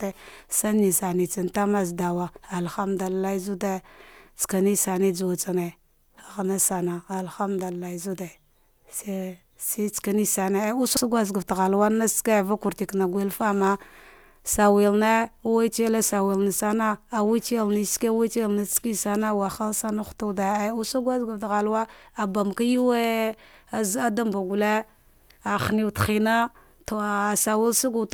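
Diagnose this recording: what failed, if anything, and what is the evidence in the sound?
Nothing in this speech recording points to a failure at any stage of the chain. There is no event in the sound that calls for a diagnosis.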